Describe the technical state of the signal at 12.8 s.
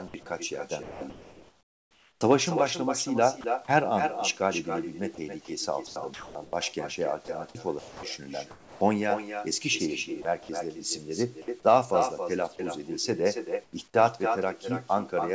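At 12.8 s the speech carries an echo with no canceller, present throughout the clip. The far end's loudspeaker feeds its microphone and nothing removes it. A copy returns roughly a third of a second later, about 6 dB quieter and thinner. Nothing above 8 kHz is present, which fits a G.722 call path.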